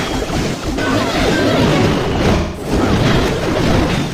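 From 1.58 s to the end, the audio was likely run through a time-stretched section, sped up by 1.42 times with its pitch held by dropping short slices. The pace jumps abruptly while the pitch stays put, leaving the rest sounding rushed.

From 2.36 s to 2.72 s, there is AAC frame loss with concealment. The decoder lost data, a gap of about 0.21 s that fits roughly five frames, and rebuilt it from the last good spectrum. The patch sounds smeared, noisy or phasey.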